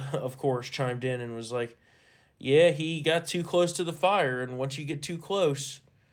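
Three short stretches of this speech sound rougher and noisier, from 1.09 to 1.11 s, 3.95 to 4.05 s, and 4.91 to 4.93 s. Each is a lost packet rebuilt from error correction. Packets went missing, but the next packet carried a low-bitrate copy. The decoder played that copy, so there is no gap. The first and last patches last 20 ms each, which fits one packet. The middle one lasts about 100 ms and points to three lost packets, 60 ms rebuilt in all.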